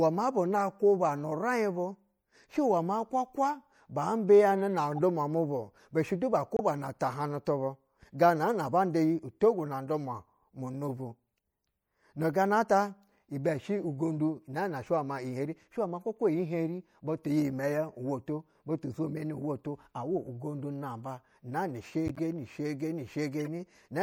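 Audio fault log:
throughout: MP3 compression. The speech sounds watery and swirly, with dulled treble and smeared consonants, likely from low-bitrate MP3 encoding around 64 kbps.
1.76 s, 4.92 to 5.01 s, 6.56 to 6.61 s, 22.06 to 22.19 s, 23.40 to 23.48 s: corrupt frame decoded. Damaged compressed frames were played anyway, misplacing energy in frequency. Each gives a brief chirp or noise burst, loudest near 6.6 s.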